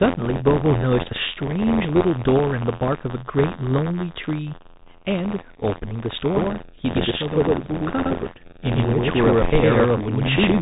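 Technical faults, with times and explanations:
Throughout: buffer tearing. A robotic rattle at about 86 Hz rides on the speech and drops out in the pauses. That rate fits a 512-sample buffer. The writer and reader have slipped, so a small slice of each period, roughly 7 percent, replays audio about 50 ms old between hard joins.
Throughout: Bluetooth CVSD headset codec. The speech is narrowband with nothing above 3.8 kHz. Sibilants sound scratchy and a granular hiss sits beneath the speech. The sound points to a 64 kbps one-bit delta coder whose adaptive step cannot keep up with loud, bright passages.
6.37 s to end: doubled audio track. A second full-band copy of the speech enters abruptly, trailing by about 100 ms at roughly equal level. It has no decay or room colour, which likely points to a second capture path or an edit that left two offset copies mixed together.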